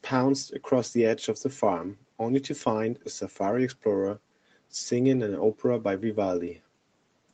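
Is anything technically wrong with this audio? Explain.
No, nothing technically wrong stood out on listening to this speech.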